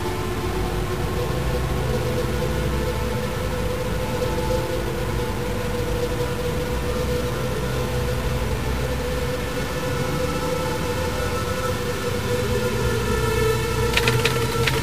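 A stuck bit is present throughout: harsh, buzzy distortion rides on the audio, and quiet passages fill with noise from a step of about -30 dBFS. The likely cause is a broken line or converter holding one data bit fixed, shifting roughly half the samples by its weight.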